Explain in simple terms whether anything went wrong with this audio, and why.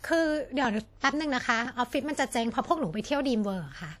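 Compression damage runs through the whole speech clip and is plainly audible, likely from WMA compression. That kind of codec squeezes the sound in chunks, and the rounding errors it leaves behind spread out, giving a washy, ringing quality with a hiss that rises and falls with the voice.

There's also a pre-echo at about 1.00 to 1.03 s. A sudden sound landed late in one of those chunks, so the hiss meant for it leaked into the quiet just before, about 26 ms of smear ahead of the attack.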